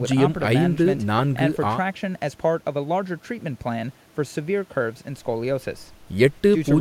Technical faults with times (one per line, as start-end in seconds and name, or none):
none